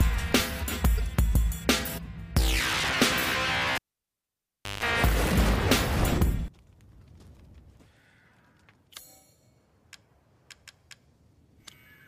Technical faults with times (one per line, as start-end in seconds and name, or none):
0.97-1.00 corrupt frame decoded
2.00 corrupt frame decoded
3.75-4.84 cable pulled and plugged in